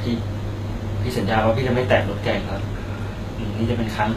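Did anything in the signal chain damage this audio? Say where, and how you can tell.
Yes, at the codec stage, and the damage runs through the whole speech clip. The treble is bright yet gritty and metallic, with sibilants turning lispy, and nothing reaches above about 14.9 kHz. That points to HE-AAC compression, likely at a low bitrate around 20 kbps. The upper band is rebuilt by copying lower bands upward, so its harmonics don't line up. A plain low-pass or narrowband codec would sound dull instead, and MP3 would give watery swirling without invented treble.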